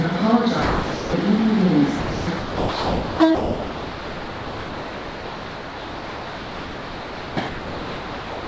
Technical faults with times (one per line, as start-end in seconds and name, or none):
0.62-1.13 sound dropped by the voice detector
2.00-8.47 sound dropped by the voice detector